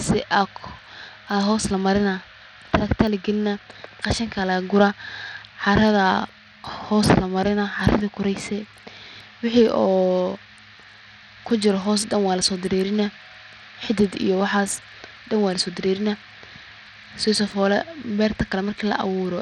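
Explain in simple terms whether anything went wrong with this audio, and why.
Something did go wrong: from start to finish, the speech has a gritty, grainy edge and the treble keeps thinning out or flickering. That points to likely Bluetooth SBC compression, where the codec starves the upper frequency bands of data and roughly rounds off the rest.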